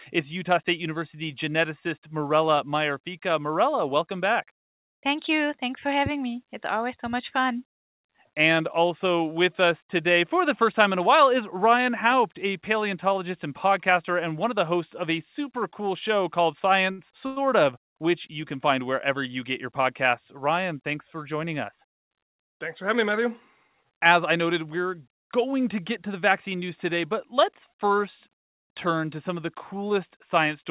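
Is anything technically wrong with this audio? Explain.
Yes. There are two brief interruptions in the speech, close together.

A short stall from a late packet comes at 16.92 s, right after "super cool show called". A packet arrived late and the jitter buffer ran dry. The last sound was stretched for about 63 ms, then playback resumed where it stopped. Nothing is lost, but one sound drags slightly.

A call audio freeze follows from 17.26 to 17.38 s, just before "of which you can". The sound hangs as a fading buzz for about 101 ms, never reaching silence, then carries on. The likely cause is packets held up in transit, emptying the buffer. A gap was inserted, with nothing missing.

Both happen on a call path with nothing above 4 kHz, which fits a narrowband G.711 mu-law codec.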